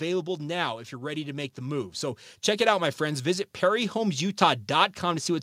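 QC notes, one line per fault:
0.89–5.38 s, automatic gain rising: the level climbs steadily across this span, ending about 8 dB louder than where it began. The speech and the background noise get louder together. That shared swell is the giveaway. An automatic gain control judged the input too quiet and kept pushing its gain up. It acts on the whole signal, not just the talker. Because the change is spread over about four and a half seconds, there is no jump, only a slow upward drift.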